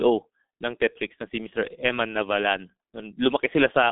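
From start to finish the speech has been through the G.723.1 codec, and it's pretty badly mangled. The band sits roughly between 200 Hz and 3.6 kHz, with nothing at all above 3.8 kHz, so the whole thing sounds muffled and boxy. The codec chops the signal into coarse 30 ms chunks and rebuilds the voice from a sluggish model, which fits a very low rate around 6.3 kbit/s. That's why it comes across hoarse, with the consonants all smeared together.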